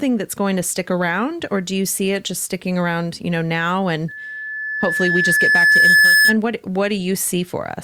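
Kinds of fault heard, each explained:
Loudspeaker feedback squeal: a microphone picks up its own loudspeaker, so a 1.7 kHz tone builds over about two seconds into a squeal, ending around 6.4 s.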